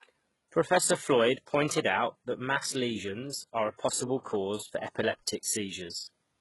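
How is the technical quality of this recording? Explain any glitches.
Technical quality is poor, with heavy HE-AAC compression damage running the whole way through the speech. The top end stops dead around 11.5 kHz, and the treble below that sounds synthetic: the s sounds come out gritty, lispy and a bit metallic. That's likely spectral band replication at work. The codec keeps only the lower spectrum and fakes the highs by copying bands upward under a rough envelope, and the damage level points to a very low bitrate, something like 12 kbps.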